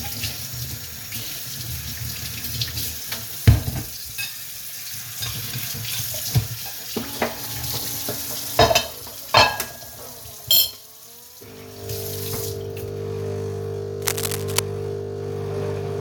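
The clip is a recording of sounds. From 14.01 to 14.59 s, a burst of cable scratch noise cuts across it. It lasts a little over half a second. It is a dense, ragged crackle, roughly as loud as the sound itself, so it sits right on top of it. The cause is likely a worn cable, plug or control being moved. Its contact resistance jumped about rapidly, and that spat uneven noise into the signal.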